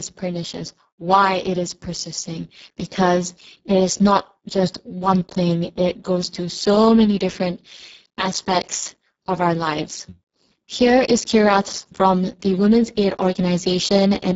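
Throughout, the speech sounds hoarse, noisy and near robotic, with nothing above 7.7 kHz: heavy Speex codec damage, fitting a bitrate near 6 kbps.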